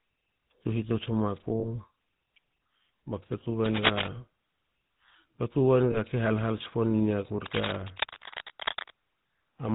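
Throughout, the speech carries the buzzy, gravelly roughness of the GSM full-rate codec, which fits the 13 kbps full-rate mode. The codec rebuilds the voice from a vocal-tract model excited by sparse regular pulses, so the fine texture of the voice is lost. On a spectrogram there is a hard ceiling at 4 kHz with empty space above it, and the harmonics look coarse and grainy.

From 1.60 to 1.65 s comes the first lost GSM frame, a gap consistent with one 20 ms frame. The decoder repeats the last good frame's settings, and this is heard as a brief metallic ring in place of the speech. A spectrogram shows a short block of frozen, repeated spectral pattern.

From 3.65 to 4.07 s, cable scratch noise rides over the speech, somewhat louder than the voice. It is likely a worn cable or connector being moved, with its contact resistance jumping about. It sounds like scratching or rustling. On a spectrogram it appears as dense, irregular broadband speckle, and the waveform shows jagged spikes.

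At 5.92 to 5.98 s a second lost GSM frame, again about 20 ms of missing audio, produces the same short metallic hold. It looks the same as the first, a brief repeated spectral slice.

From 7.46 to 8.91 s a longer burst of cable scratch noise sits a little below the speech level, likely from a loose contact. It is quieter but lasts longer, and shows as scattered broadband specks and ragged spikes layered under the voice's harmonics.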